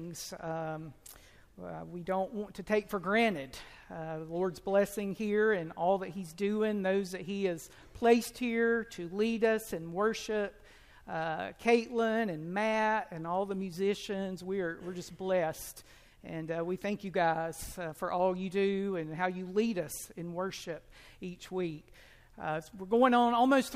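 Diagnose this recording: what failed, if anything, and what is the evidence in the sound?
Nothing failed; no fault is audible anywhere.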